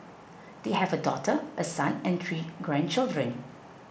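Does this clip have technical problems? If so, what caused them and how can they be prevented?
No, there are no technical problems in this clip.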